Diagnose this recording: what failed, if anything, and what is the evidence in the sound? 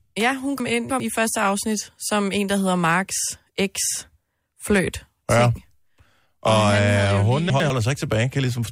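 Chunks out of order in the buffer or network stage. From 0.6 to 1.0 s, before "i første afsnit som", a 100 ms block plays three blocks late; at 7.5 to 7.7 s, one block plays late. Hard joins jumble the speech, but unlike a dropout, nothing is missing.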